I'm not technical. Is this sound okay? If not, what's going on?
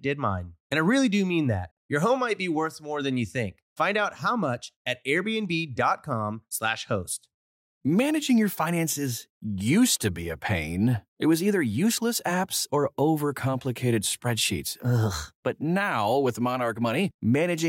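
Yes, nothing wrong can be heard in this recording.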